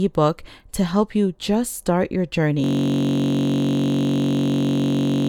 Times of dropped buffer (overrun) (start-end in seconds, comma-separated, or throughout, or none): none